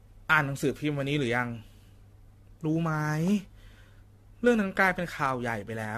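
Throughout the speech, the sound is swirly, smeared and hollow, with blurred consonant attacks and nothing above 14 kHz. This is likely generation loss: about seven rounds of lossy encoding, fitting AAC-LC at 64 kbit/s, each requantising on a shifted frame grid.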